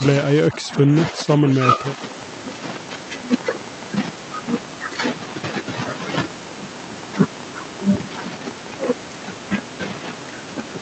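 An echo canceller likely caught in double talk turns the talker down along with the echo, so the speech is suppressed in double talk: from 0.49 to 0.95 s it sinks by roughly 15 dB, then from 1.11 to 1.99 s dips more gently, by a few dB.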